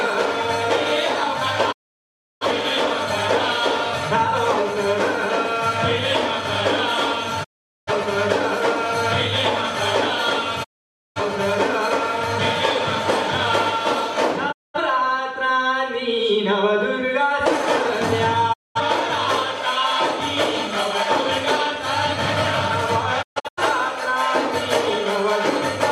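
Digital broadcast dropouts mute the sound at 1.71, 7.43, 10.63, 14.51, 18.52 and 23.21 s. The receiver lost valid frames and fell silent after a 20 ms fade. Gaps run 0.2 to 0.7 s, fitting roughly 43 ms frames. The last one breaks into short holes.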